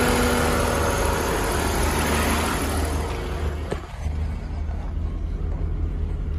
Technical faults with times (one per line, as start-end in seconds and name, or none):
3.34-4.37 zipper noise